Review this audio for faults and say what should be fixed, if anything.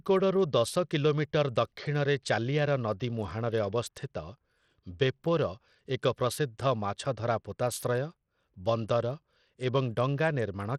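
Treble flickers and vanishes under gritty noise throughout the speech, likely Bluetooth SBC compression at about 80 kbps, with a spectrogram showing patchy, blocky upper bands. Prevent it by recording over a wired connection or a higher-quality Bluetooth codec.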